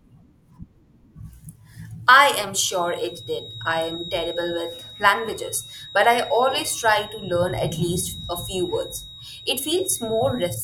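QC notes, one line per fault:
2.55 to 10.64 s, feedback whistle: a thin, steady tone at 3.8 kHz enters behind the speech and holds to the end of the clip, sitting around 15 dB below it and swelling and fading slowly in level. The likely cause is a loudspeaker-to-microphone loop running right at its feedback point, where one frequency keeps recirculating with just enough gain to sustain itself without building into a runaway howl.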